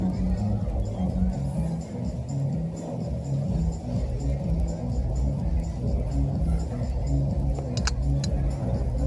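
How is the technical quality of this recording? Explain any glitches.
The recording has a steady rhythmic ticking from start to finish. The cause is a resampler restarted on every block. Each 100 ms block, apparently converted down from 48 kHz to 24 kHz, was processed in isolation, so its edges lacked the true neighbouring samples. The small error at each boundary produces ticks at 10 per second, present whenever sound is playing.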